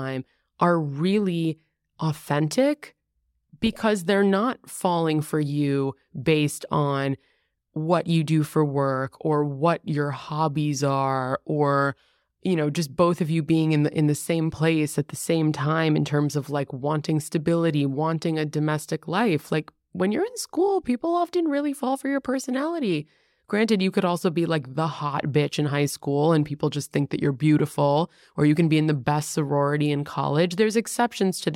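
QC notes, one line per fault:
No faults heard in this speech.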